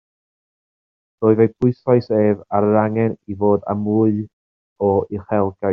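Nothing goes wrong anywhere in this short bit of speech; there isn't a single technical fault to point to.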